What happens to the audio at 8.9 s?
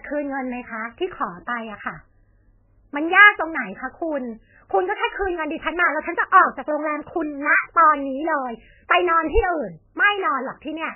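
A brief hiss smears in just ahead of a sharp attack from 8.88 to 8.90 s, about 21 ms, so the onset sounds soft and blurred. This is pre-echo: the codec spreads quantisation noise across its whole transform block, so noise sized for the loud attack also fills the quiet moment before it. Around it, the speech sounds watery and swirly with nothing above 3 kHz, which points to heavy MP3 compression, likely at a very low bitrate near 9 kbps, cutting the treble and dropping weak frequency components frame by frame.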